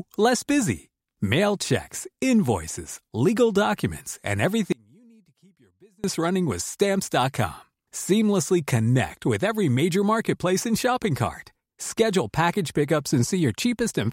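At 4.72 s the speech cuts out abruptly, and it returns just as suddenly at 6.04 s. About 1.3 s of signal is lost. This is an audio dropout to a faint residue. The gap is not silent. A faint trace of the sound remains, roughly 35 dB below its normal level. The change is a hard cut, not a pause or a fade. The likely cause is a brief break in the signal path while the chain after it stayed live.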